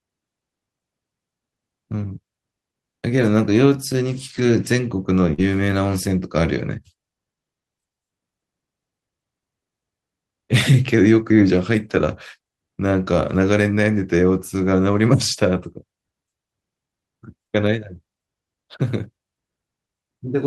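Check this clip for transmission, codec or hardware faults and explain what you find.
Two kinds of transmission fault occur in the speech, both from lost packets, and both are heard around 3 to 5.4 seconds.

Lost packet rebuilt from error correction appears at 3.17–3.27 s, 4.29–4.47 s and 5.38–5.40 s. The rebuilt stretches last 60, 100 and 20 ms, which fits runs of three, five and one 20 ms packets. The following packets carried low-bitrate copies that the decoder played in place of the missing audio, so nothing drops out. Those stretches sound rougher and grainier. On a spectrogram they show as smeared, noisier patches with weaker fine harmonic detail. The waveform stays continuous.

Short concealed packet loss occurs at 5.33–5.40 s. About 40 ms of audio arrived too late, and the receiver covered the hole with roughly 44 ms of extrapolated sound, continuing the preceding pitch or shaped noise before blending back into the real signal. 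It comes across as a brief smear or wobble. A spectrogram shows unnaturally steady, repeated harmonics or a flat noise patch, and the waveform shows a regular cycle that fades out.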